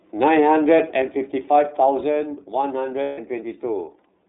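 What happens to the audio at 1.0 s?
At 1.02 s the whole level drops abruptly by about 4 dB, speech and background together, in a single step rather than a fade, and it stays at the lower level afterwards. This microphone volume stepped down behaviour is likely the call software judging the input too hot and cutting the microphone's input gain in one move, so everything captured after that instant arrives quieter.

Around that moment, as across the whole clip, the iLBC codec shapes the sound. The audio is confined to a narrow telephone band of roughly 250 Hz to 3.7 kHz, with nothing audible above it, and the speech has a plainly audible rough, slightly synthetic texture. That comes from iLBC coding each 30 ms frame's excitation independently of the previous frame, which fits its 13.33 kbps mode, and the thin, buzzy coloration is heard straight through the level drop.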